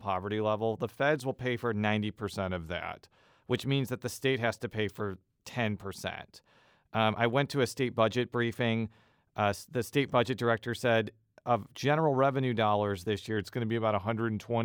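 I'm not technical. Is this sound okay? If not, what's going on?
No. From 2.23 to 3.18 s and from 13.37 s to the end, the speech slows about 5% and drops nearly a semitone; the first time, it then snaps back. That's likely a drift correction step, not a steady wobble.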